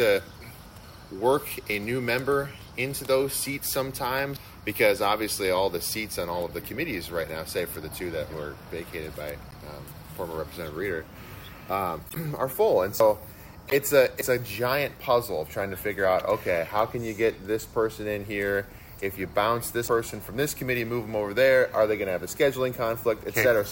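At 4.37 s the sound jumps forward: about a fifth of a second is missing and the two sides are butted together, with no gap. The likely cause is a dropped buffer (overrun), where the hardware overwrote samples before the program collected them. On a waveform this shows as an abrupt discontinuity at one instant. A spectrogram shows a thin vertical broadband line where the content changes without transition.

From 9.50 to 9.54 s a short glitch comes from a corrupt frame decoded: one damaged compressed frame played anyway, with its energy placed at wrong frequencies. Longer bursts follow at 12.09–12.17 s and 13.67–13.75 s, each spanning a few frames. On a spectrogram these appear as brief, blocky patches of misplaced energy that do not match the surrounding harmonic structure. Their edges are cut sharply at frame boundaries.

The same skip-ahead returns at 13.00, 14.21 and 19.88 s, each losing about a tenth of a second. 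Each is another single-instant splice with a vertical broadband line.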